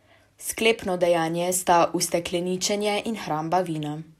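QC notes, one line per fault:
No technical faults were found in this recording, and the signal holds steady for its full duration.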